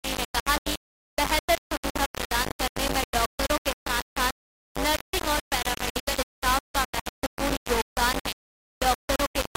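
From the first moment to the end there's a steady 50 Hz mains hum under everything, with a few low harmonics riding on it. It sits only a little below the sound itself, about 5 dB down, so it's hard to ignore. That's the power line leaking into the signal, typically through a ground loop or a transformer sitting too close to the gear. You hear it as a constant low drone that never shifts.

Running the whole way through as well is heavy grit that follows the sound. When things get quiet it turns coarse and rough, and the quietest bits drop out or sputter between steps. The grit is roughly as loud as the sound it's riding on. That points to low bit depth without dither, likely something like 3-bit resolution with plain rounding, so the error tracks the signal and comes out as changing, grainy distortion.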